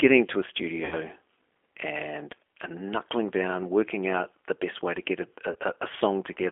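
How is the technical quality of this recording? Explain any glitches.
The recording sounds like narrowband telephone speech with audible codec roughness throughout, plus two brief dropouts where the speech turns buzzy or noisy and then recovers.

Throughout, the speech is confined to roughly 300 Hz to 3.4 kHz and has a slightly rough, synthetic edge. That points to the G.729 codec, likely the G.729A variant at 8 kbit/s. It rebuilds each 10 ms frame from a vocal-tract filter, pitch predictor and a few pulses.

From 0.85 to 0.96 s, just after "to a", and from 5.52 to 5.57 s, after "way to get a", the speech smears into a fading buzzy tone or coloured noise. This is VoIP packet loss concealed by the speech codec. The first gap fits about 60 ms of lost audio, roughly two packets, and the second about 30 ms. The decoder extrapolates from its last frame and then takes a moment to recover.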